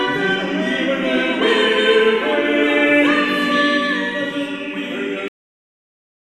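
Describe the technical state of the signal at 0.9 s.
At 0.9 s the signal is intact, with no dropout, clipping, glitch or other fault present.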